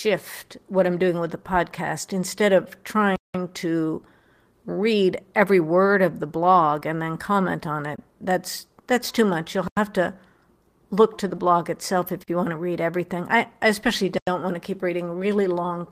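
At 3.16 s the speech drops into a block of digital silence lasting about 186 ms, which fits an 8192-sample buffer that wasn't filled in time. The signal cuts out and back with no fade. On the waveform it is a flat line. On the spectrogram it is a clean vertical gap.

At 6.79 s there is short concealed packet loss. About 20 ms of audio failed to arrive, and the decoder extended the preceding sound for roughly 15 ms before blending back. It is heard as a brief smear rather than a gap. The waveform shows no break across that span.

Further blocks of digital silence fall at 7.96 s (about 22 ms), 9.68 s (about 93 ms) and 12.24 s (about 43 ms). The 9.68 s block fits a 4096-sample buffer.

At 11.35 s, a second concealed loss of about 20 ms is patched with roughly 22 ms of extrapolated sound.

The last block of digital silence sits at 14.18 s, again about 93 ms long, with the same flat line as the earlier blocks.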